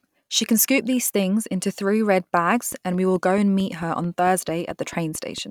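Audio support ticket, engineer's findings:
Train of clicks, 2.72–5.39 s: steady ticking over the speech at about 4.5 per second, around fifteen near-identical pops, peaking about as loud as the speech, audible in pauses. Likely interference pickup from nearby equipment or a faulty connection or power supply injecting periodic pulses.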